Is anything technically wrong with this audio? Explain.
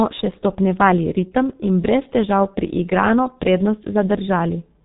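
Yes. Throughout, the speech sounds heavily muffled and hoarse with smeared consonants, the mark of G.723.1 codec coding: nothing above 4 kHz, coarse 30 ms frames, fitting roughly 6 kbit/s.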